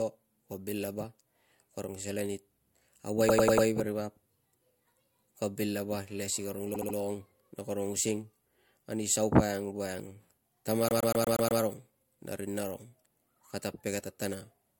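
Speech with three bursts of repeated frames, where the decoder replays the same short stretch of compressed audio as a stutter. At 3.28–3.66 s, just before "veri vap", a 96 ms block plays four extra times and adds 384 ms. At 6.73–6.95 s, between "si karong" and "na karong using", a 72 ms block repeats three more times. At 10.89–11.61 s a 120 ms block returns six times and adds 720 ms. A waveform shows identical copy-pasted segments, and a spectrogram shows the same slice tiled side by side.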